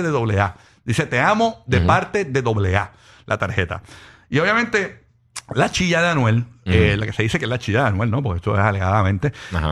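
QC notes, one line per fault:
No fault found in the clip.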